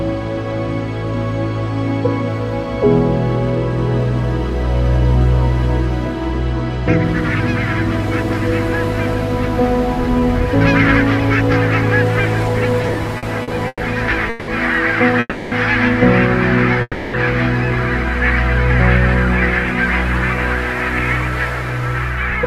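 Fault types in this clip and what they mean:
Repeated stalls (stutter): Between 12.83 and 13.82 s the jitter buffer ran dry ten times, each gap bridged by stretching the last sound, the longest 120 ms. About 29% of that second is filler, yet nothing is lost. Many short hitches make it drag rather than stop.
Call audio freeze: Three single holds, at 14.30 s for 180 ms and at 15.20 s and 16.82 s for 320 ms each, where the last sound hangs and fades, briefly reaching silence in the longer two, likely from delayed packets. Unlike the stutter, each is one pause before resuming intact.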